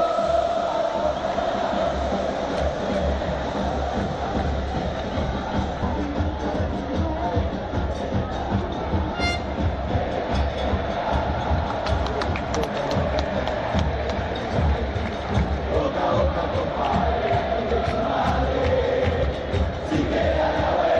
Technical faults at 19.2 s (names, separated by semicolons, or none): MP3 compression; compressed frames skipped